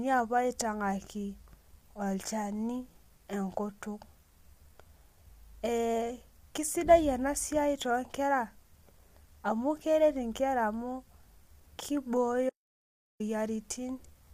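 From the start, the speech carries plainly audible low-delay AAC compression, likely AAC-ELD at a bitrate that sounds like about 32 kbps. Its short frames blur the pitch harmonics, so the voice turns rough and grainy, with noise filling between harmonics and a thin, synthetic top band.

From 12.50 to 13.20 s there is an audio dropout to silence lasting about 0.70 s, likely from lost input while zeros kept being written. The sound cuts off mid-flow into silence with no room tone.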